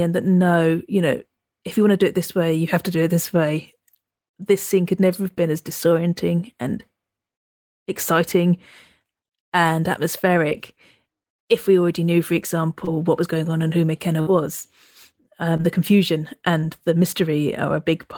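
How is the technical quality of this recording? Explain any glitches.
The recording has audible network dropouts in its second half, clustered between about 10 and 17 seconds.

Brief smears or wobbles at 10.49–10.53, 12.85–12.89, 15.57–15.61 and 16.61–16.65 s are short concealed packet loss. About 20 ms of audio never arrived, so the receiver extended the preceding sound to bridge each gap.

At 14.21–14.29 s, a held buzz or fading hiss is a burst of packet loss. About 60 ms went missing, and the concealment stretched the last sound while fading it before the audio resumed.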